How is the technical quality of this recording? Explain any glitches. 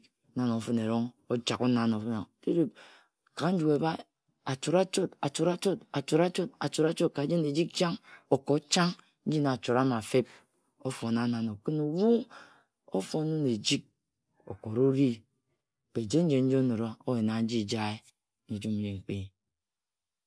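No technical glitches can be heard anywhere in the recording, and the signal stays intact and continuous throughout.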